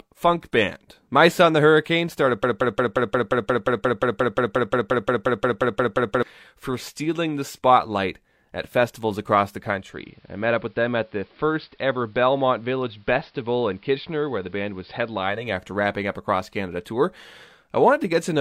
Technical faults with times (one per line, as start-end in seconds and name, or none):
2.44-6.23 broken-record loop
9.65-15.60 digital radio blending to analogue